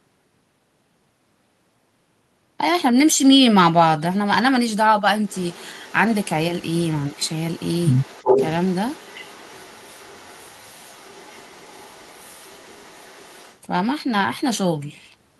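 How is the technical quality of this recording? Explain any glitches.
The recording has two glitches, both tied to echo control on a call.

Echo leak, 5.26 to 5.99 s, 6.23 to 6.36 s, and 6.58 to 13.59 s: a faint copy of the speech returns about 358 ms late, at about 30 dB below the speech in the first two scraps and about 25 dB below in the long stretch. This is likely a loudspeaker echo the far end's canceller failed to remove.

Speech suppressed in double talk, 7.12 to 7.16 s: during the long echo stretch the speech briefly dips by about 10 dB for some 40 ms. The likely cause is the echo canceller mistaking overlapping talk for echo and turning everything down.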